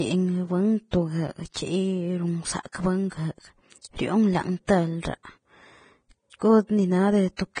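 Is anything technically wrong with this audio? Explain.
Yes. The speech has been squeezed through a low-rate lossy codec, likely Vorbis, with heavy damage. The audio points to a bitrate of roughly 23 kbps, forcing the encoder to cut off everything above 9.7 kHz and to quantise the remaining treble so coarsely that fine detail becomes noise of similar energy. The speech therefore sounds dull at the top yet hissy and grainy, with roughened tones and softened attacks.

Pre-echo appears at three points: 1.54 to 1.56 s, 2.72 to 2.74 s and 4.66 to 4.69 s. Each time, a sharp attack lands late in a transform block, and the quantisation noise sized for that loud onset spreads across the whole block, including the quiet moment before it. The result is a brief hiss running ahead of the attack by about 21, 24 and 29 ms respectively, leaving each onset smeared rather than crisp.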